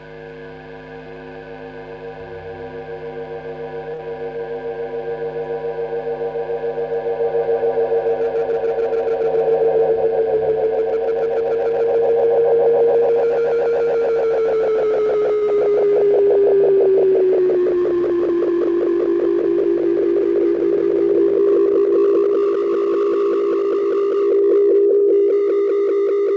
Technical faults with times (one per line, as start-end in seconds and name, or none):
3.94-4.01 short stall from a late packet
9.08-9.76 jitter buffer speed-up
15.33-15.43 short stall from a late packet
15.45-15.49 short concealed packet loss
15.80-16.04 jitter buffer slow-down
20.51-21.74 jitter buffer speed-up